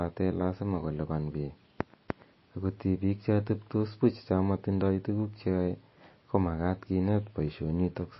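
Speech with plainly audible MP3 compression throughout: nothing above 5.8 kHz and watery, swirling artefacts, likely from a low bitrate around 24 kbps.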